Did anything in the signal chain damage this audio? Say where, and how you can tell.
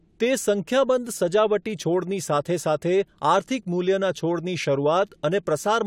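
No, nothing in the chain has left a mark here, and the speech comes through without any sign of damage at any stage.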